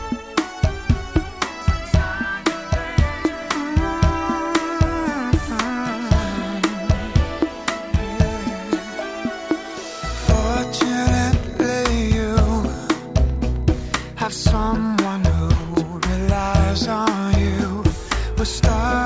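Nothing stood out as a technical fault on listening to this recording.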